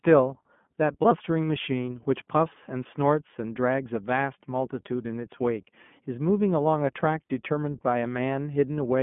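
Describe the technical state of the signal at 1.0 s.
At 1.0 s, as throughout, iLBC codec coding of independent 20 ms frames gives the speech a rough, synthetic edge, with nothing above 3.6 kHz.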